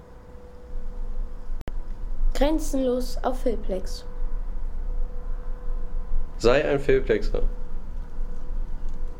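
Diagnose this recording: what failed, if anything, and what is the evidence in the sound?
The sound cuts to silence at 1.61 s and returns at 1.68 s, a gap of about 64 ms. It resumes further along, as if it had kept playing. This is likely a Bluetooth dropout on the wireless playback link, consistent with roughly three audio packets arriving too late and being discarded.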